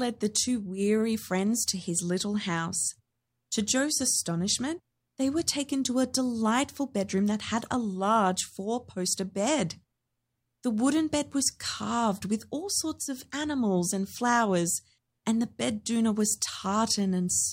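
No technical faults detected.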